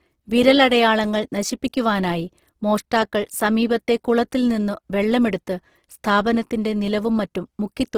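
From start to finish the speech has a rough, grainy texture, with a hiss-like fizz where the finer detail should be. That's likely Opus compression running its music mode at a very low rate, which fits about 16 kbps, filling starved bands with noise instead of real detail.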